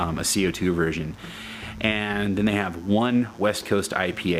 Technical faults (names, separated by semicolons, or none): mains buzz